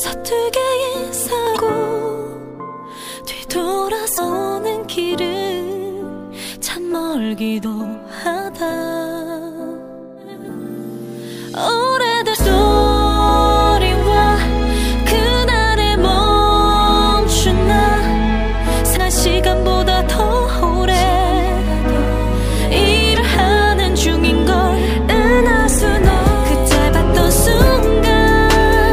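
Brief glitches of roughly 40 ms at 1.53, 4.14, 12.32, 18.93 and 23.13 s are damaged data in a compressed stream: the decoder misreads corrupted frames and resynchronises.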